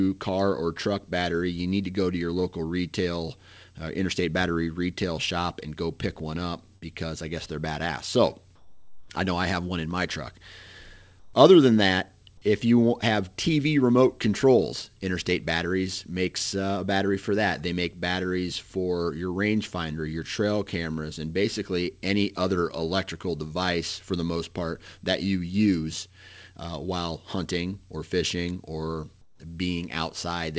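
At 6.76 to 6.84 s, a burst of packet loss drops about 60 ms after "go pick one up"; the receiver stretches the last sound for 56 ms, then jumps ahead to "I guess they're badass". At 8.56 to 9.10 s before "I know I have", 11.20 to 11.34 s, and 29.22 to 29.40 s after "hunting or fishing or", the real background gives way to steady, featureless noise about 10, 8 and 13 dB quieter, likely comfort noise in place of the background while transmission paused. All of this sits on G.722 audio with nothing above 8 kHz.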